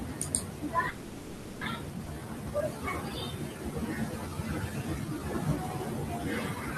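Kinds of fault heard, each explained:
Call audio freeze: From 0.89 to 1.63 s the sound halts and the last instant is stretched into a buzzy, hissy continuation that fades over about 720 ms without reaching silence, after which the audio resumes where it stopped with nothing lost. The likely cause is held-up packets draining the jitter buffer. On a spectrogram this shows as horizontally smeared, repeating bands that dim gradually; the waveform shows a periodic, decaying pattern instead of normal speech.
Skip ahead: At 2.05 s playback jumps forward, dropping roughly a third of a second of speech, and the two sides are butted together with only a 10 ms join. This comes from a dropped stretch of audio or a jitter buffer discarding data on overflow while later audio was already queued. A spectrogram shows an abrupt discontinuity in formant tracks and harmonics with no gap. The waveform shows a sudden change in shape and level at a single point.
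Jitter buffer slow-down: From 2.13 to 3.72 s the speech runs at about 90% speed, gaining 167 ms, and from 4.12 to 5.2 s at about 93%, gaining 84 ms. Pitch is unchanged, so sounds are drawn out. The receiver was building up a reserve by repeating single pitch periods and bits of pauses. On a spectrogram, harmonics and formants look stretched along the time axis. The waveform shows runs of near-identical consecutive cycles.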